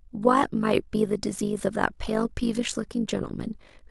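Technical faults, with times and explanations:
Throughout, overlap-add ripple: the speech has a fast, buzzy flutter riding on it, like a rough robotic tremolo. The level rises and dips by about 11 dB around 50 times a second. That pattern comes from the audio being chopped into windowed frames and stitched back together with an overlap that doesn't add up to a steady gain, so the level rises and falls once every frame.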